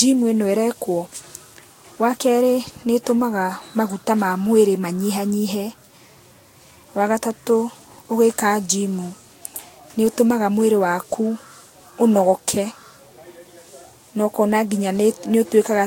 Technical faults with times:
0.00-15.86 generation loss

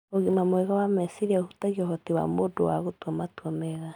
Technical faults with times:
none

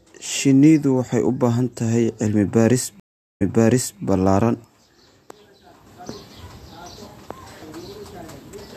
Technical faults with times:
3.00-4.01 stream reconnect

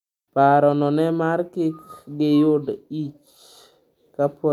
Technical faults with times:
none

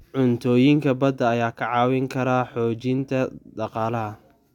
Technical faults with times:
none

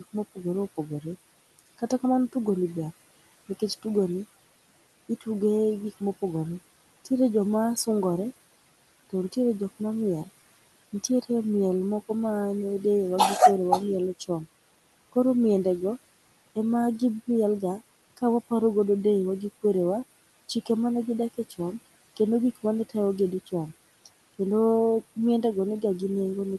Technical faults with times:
0.00-26.59 noise suppressor artifacts

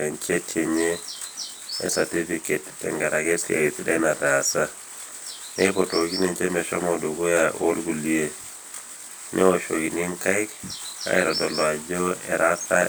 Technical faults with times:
0.00-12.88 channel delay (comb filtering)

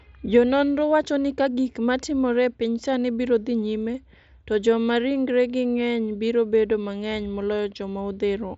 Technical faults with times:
none

